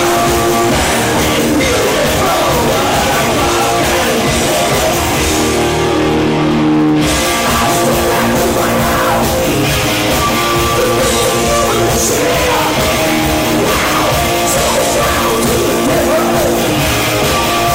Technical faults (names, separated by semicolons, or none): none